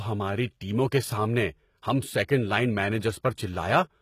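From start to finish the speech carries plainly audible HE-AAC compression, likely from a low-bitrate encode. The upper band sounds bright but synthetic, with s sounds gritty and lisping, because the treble is rebuilt from copied lower bands rather than coded directly. On a spectrogram the top band looks smeared and blocky, its harmonics misaligned above the crossover, and everything stops sharply at about 14.9 kHz, which fits a very low bitrate.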